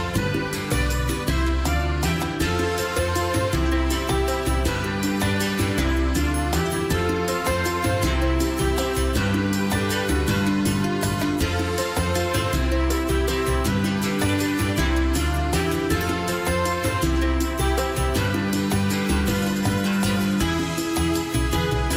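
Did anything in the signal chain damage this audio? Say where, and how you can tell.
No, the signal chain did no damage.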